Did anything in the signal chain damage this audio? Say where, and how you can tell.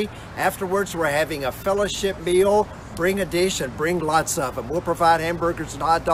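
Yes. Throughout the clip a buzz at 43.1 Hz tracks the signal's level, the sign of a filter restarted on every block in the block-processing stage. The filter resets to silence each block, fitting 1024-sample blocks. Unlike mains hum, it fades when the audio does.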